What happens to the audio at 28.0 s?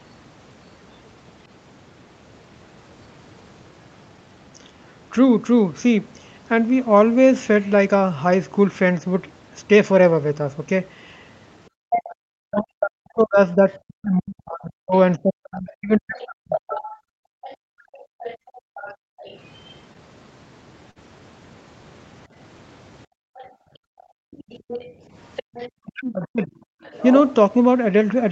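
Nothing goes wrong at 28.0 s; the speech there passes through intact, with the call's usual band-limited sound and no dropout, glitch or distortion.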